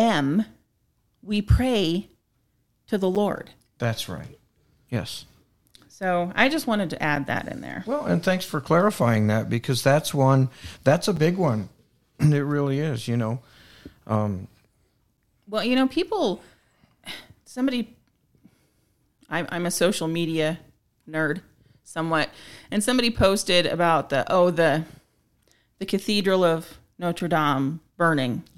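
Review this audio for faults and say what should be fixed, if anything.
The speech has a gap between chunks seven times: at 3.15, 7.16, 11.16, 15.17, 19.18, 23.19 and 27.19 s. They fall every 4 s. Each is a hard-edged hole of about 7 ms. One splits "that's one that's a" from "big one". Others come just before "well you know people" and "I'm I'm a social". Nothing is lost. The stream simply stalls at each 4-second join, which points to padding or a late chunk start.

To prevent it, trim codec padding and schedule each chunk to begin exactly where the previous one ends.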